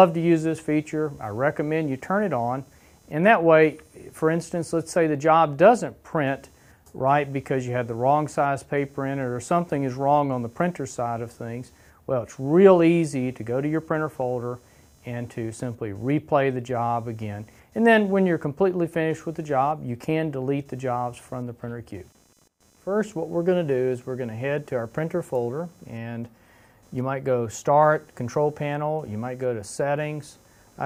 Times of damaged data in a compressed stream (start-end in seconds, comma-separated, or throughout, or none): none